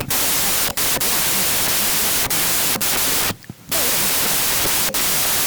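Throughout, wrong sample width: 16-bit samples appear read as packed 24-bit. Loud noise buries the speech, which runs 1.5 times fast and high-pitched.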